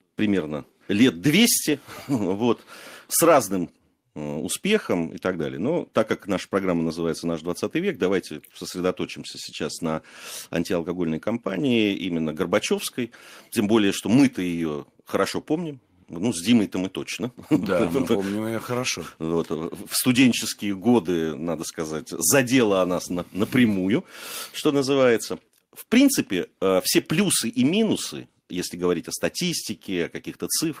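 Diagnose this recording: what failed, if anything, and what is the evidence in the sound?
Nothing failed: no stage in the chain, from capture through processing and transport to playback, leaves any audible fault in the speech recording.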